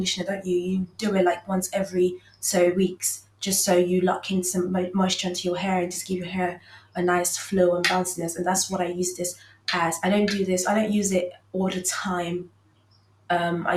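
Throughout, the level pumps and flutters, with held and fading parts sinking while attacks stay up, in swings of around 15 dB. This is a noise suppressor applied to music or sounds: a speech-tuned suppressor mistakes sustained tones and tails for noise.

Sound is cut by the noise suppressor at 0.20–0.48 s (about 14 dB down), then 0.86–1.02, 2.15–2.43, 3.19–3.42, 6.55–6.96, 9.34–9.67, 11.32–11.54 and 12.44–13.30 s (each about 18 dB). Steady or decaying sound drops out or is truncated as the suppressor clamps it.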